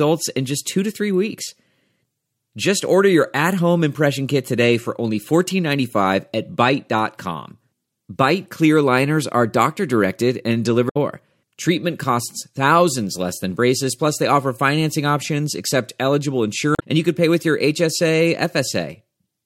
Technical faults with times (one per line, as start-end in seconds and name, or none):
10.88-10.97 damaged data in a compressed stream
16.75-16.82 damaged data in a compressed stream